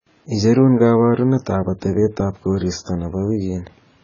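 From start to finish the speech sounds dull and smeared, with nothing at all above 7 kHz. The likely cause is heavy AAC compression, consistent with AAC-LC at a very low bitrate around 16 kbps. With so few bits, the encoder discards the top of the spectrum and coarsely quantises what remains, blurring detail. On a spectrogram this shows as a hard, flat ceiling at 7 kHz across the whole clip, with empty space above it.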